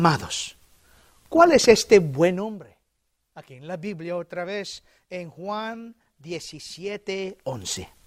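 Speech clip with zipper noise from about 6.86 to 7.77 s: a level change of around 15 dB is stepped roughly a hundred times a second without smoothing, so it ticks audibly.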